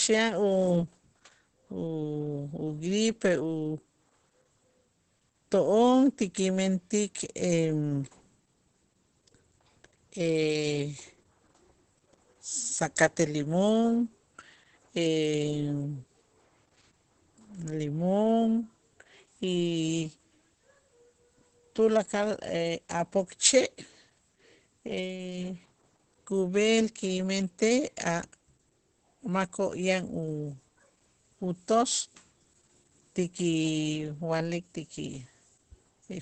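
From start to finish, the speech carries Opus voice compression damage. Nothing is left above 8.4 kHz, so the top of the band is gone and the sound is dull. That cut-off points to wideband SILK coding. The damage is heavy, which fits a low bitrate of around 10 kbps. The linear-prediction coder spends few bits on the excitation, so detail is coarse. The voice sounds muffled and hoarse, with a faintly robotic edge.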